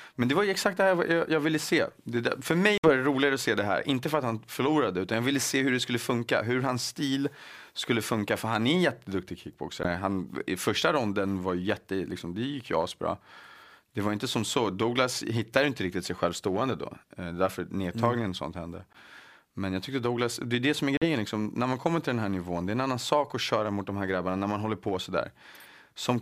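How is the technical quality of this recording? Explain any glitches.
The recording has four brief gaps in the speech, at 2.78 to 2.91 s, 9.83 to 9.87 s after "han är en jätteduktig", 18.93 to 18.96 s after "mm sånt hände", and 20.97 to 21.05 s after "är det som är". Each is likely a Bluetooth dropout. Packets arrived too late and were discarded, so the sound cuts out. It then resumes further on, as if it had kept playing.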